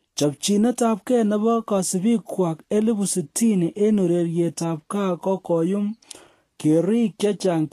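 Throughout the speech, the treble turns hissy and grainy and stops near 14.1 kHz, likely from Vorbis compression at around 36 kbps. Noise-like fizz, rather than metallic warble, sets it apart.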